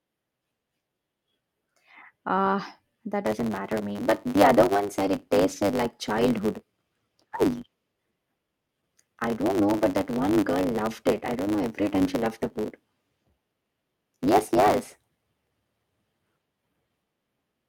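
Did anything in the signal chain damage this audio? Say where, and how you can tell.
Yes. From 3.25 s to the end, the speech carries a block size mismatch (truncated) at the driver or buffer stage. A steady 100 Hz buzz runs under the audio, and the speech moves about 1.09 times faster while keeping its timbre. One stage writes blocks longer than the next stage reads. The tail of each block is discarded, so a small slice of sound vanishes at every 10 ms boundary. That produces both the buzz and the hurried pacing.

At 8.51 s there is a skip ahead in the network or jitter buffer path. The sound jumps forward with no gap and no fill. Around four tenths of a second of speech is missing, and the two sides are butted together almost directly. Later audio was already waiting when an earlier stretch was dropped, and the playout delay fell by roughly the same amount. That is why the join lands abruptly mid-flow.

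From 8.61 s to 9.55 s, a jitter buffer speed-up follows the jump. The speech plays at 108 percent of normal speed with unchanged pitch and sounds rushed on top of the steady block-rate speed-up. The receiver's buffer held more audio than its target, so it trimmed short pitch-period pieces repeatedly, several tens of milliseconds in total, to pull the delay back down.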